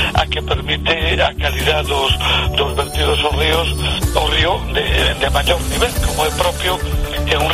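No faults can be heard anywhere in this clip.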